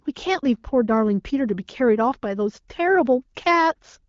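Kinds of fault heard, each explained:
Nothing goes wrong anywhere in this speech clip, and the AMR wideband HD Voice coding it passes through sounds like it's running at one of its comfortable higher rates.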